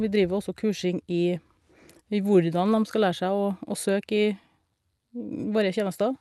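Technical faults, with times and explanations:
No technical faults can be heard in this speech clip. It has passed through a WebRTC call path with the Opus codec, which limits the audio to about 12 kHz, as expected for that path.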